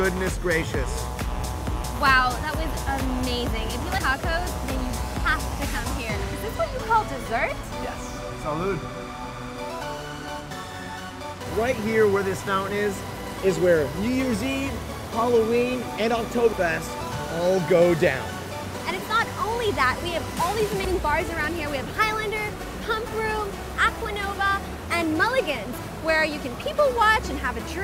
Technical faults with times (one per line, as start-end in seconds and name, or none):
1.84 damaged data in a compressed stream
3.98 damaged data in a compressed stream
11.34-11.38 damaged data in a compressed stream
16.53 damaged data in a compressed stream
20.85 damaged data in a compressed stream